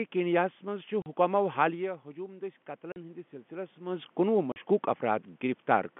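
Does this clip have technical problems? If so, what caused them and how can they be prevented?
Yes. Packet loss filled with silence occurs at 1.02 s, 2.92 s and 4.52 s. Each time, a 40 ms stretch of the speech drops to dead silence with hard edges. That gap length fits two lost 20 ms packets for which the receiver had nothing to play. A jitter buffer with packet loss concealment, backed by forward error correction or a more reliable network path, would fill or prevent these holes.

Automatic gain rising runs from 1.82 s to 4.1 s. The level reaching the microphone falls by about 12 dB as the talker moves away around 1.5 s, and the gain control then gradually lifts the level by about 4 dB, so voice and room noise swell together. Keeping a steady distance from the microphone, or using a gentler gain control, would avoid this swell.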